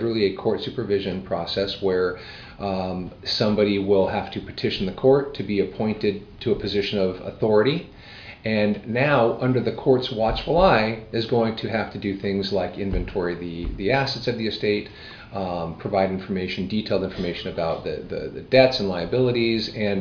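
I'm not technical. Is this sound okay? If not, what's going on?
Yes, it's fine; nothing sounds wrong with it.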